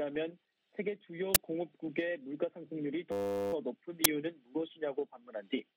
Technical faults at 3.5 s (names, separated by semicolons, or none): system hang loop